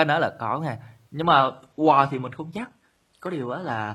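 At 1.22 s, just after "đó là có nghen", the adaptive stream switched to a lower bitrate and stays there to the end. Codec artefacts rise, with no gap at the switch, which fits a drop from 96 kbit/s AAC to 16 kbit/s HE-AAC.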